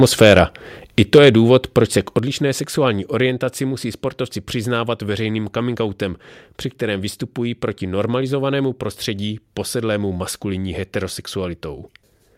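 Speech, with microphone overload in three bursts: 0.01 to 0.39 s, 1.14 to 1.29 s, and 1.55 to 1.78 s, just before "se k". Peak tops are flattened, giving a harsh, crackling edge. The first two run about 4 dB over, the third about 1 dB. The likely cause is an input volume set too high for the converter. There are also two microphone volume step-downs. The level drops suddenly by about 3 dB at 1.18 s, inside a distorted stretch, and by about 6 dB at 2.19 s, right after "se k". Both are likely call software cutting the input volume after detecting clipping.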